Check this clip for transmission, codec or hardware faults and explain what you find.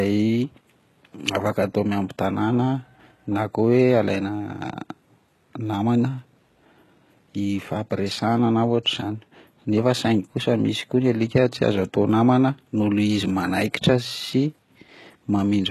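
There is one fault, present for the whole clip: HE-AAC compression. The speech carries a plainly audible codec sound, and nothing is heard above about 12.3 kHz. The treble above the crossover sounds synthetic rather than missing. That points to a likely cause of spectral band replication, in which lower bands are copied upward and shaped only by a coarse envelope. The damage fits a very low bitrate, around 16 kbps. Because the copied harmonics don't align with the real ones, s sounds come out gritty and metallic or lispy. A plain low-pass filter would instead sound dull, and standard AAC at this rate would lose the top end rather than fake it.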